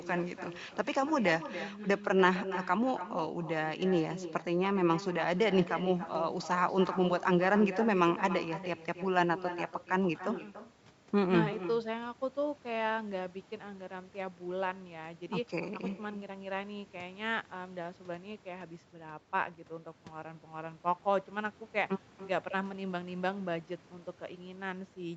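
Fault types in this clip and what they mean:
Echo with no canceller: a far-end loudspeaker leaks the speech into a microphone with nothing removing it, so throughout, each phrase returns roughly a third of a second later, about 13 dB quieter. Unlike reverberation, it is a distinct repeat, not a smooth tail.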